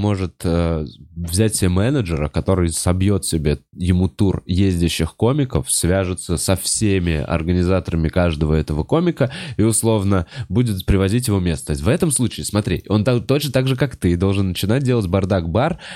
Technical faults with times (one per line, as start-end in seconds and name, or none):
none